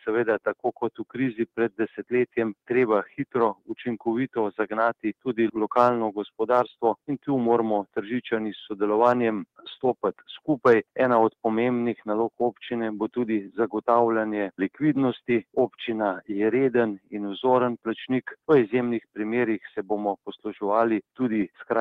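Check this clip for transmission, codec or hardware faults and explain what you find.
The clip has one kind of fault: sound cut by the noise suppressor, at 0.59–1.17 s, 1.40–2.12 s, 3.06–3.35 s, 3.54–3.72 s and 16.98–17.13 s. The suppressor misjudged wanted sound as noise and pulled it down by about 18 dB (about 13 dB at 3.06 s), so sustained or decaying parts briefly sink or cut off early.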